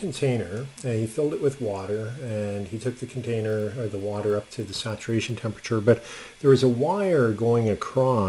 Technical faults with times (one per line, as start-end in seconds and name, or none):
2.70-6.20 resampler restarted on every block